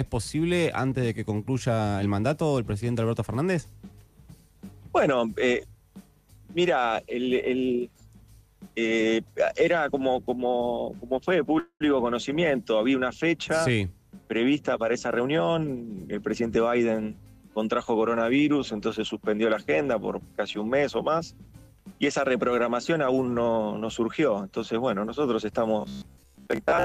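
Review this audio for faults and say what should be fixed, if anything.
From 11.59 to 11.83 s there is a call audio freeze. The last sound is stretched into a fading buzz or hiss for about 211 ms, ending in roughly 80 ms of silence. The audio then resumes exactly where it stopped, so nothing is lost, but everything afterwards runs about 211 ms later. The likely cause is packets held up in transit until the jitter buffer ran dry. Unlike a dropout, no content is skipped. A larger or adaptive jitter buffer and a more stable network path would prevent it.

From 14.94 to 16.58 s a jitter buffer speed-up plays the audio at about 112% speed while the pitch stays the same. Many short fragments are cut out in a row, removing around a fifth of a second in total so the buffer shrinks back toward its target. A resampling error would also shift the pitch upward, and that does not happen here. The sound just seems hurried. 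Spreading the catch-up more gently, or avoiding packet bursts, would prevent it.

From 25.81 s to the end, the sound turns into a rigid, metallic buzz at 66.7 Hz. It still roughly follows the underlying audio, but most of it is replaced by repeats. The likely cause is a short chunk, which fits a 15 ms buffer, being replayed whenever new audio arrives too late. Unlike a vocoder or codec artefact, the buzz locks to one fixed pitch. Delivering audio on time, through a smaller device buffer or higher thread priority, would prevent it.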